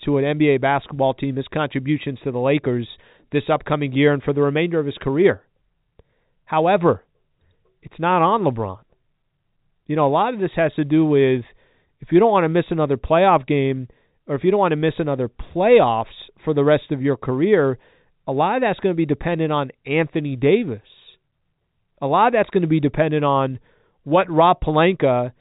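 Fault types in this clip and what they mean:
No faults can be heard in the clip. The speech has come through G.711 telephone coding, which shows as a narrow telephone band with nothing above about 3.8 kHz.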